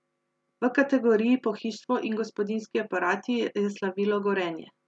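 Nothing goes wrong anywhere in this bit of speech, so there's no fault to point to at any moment.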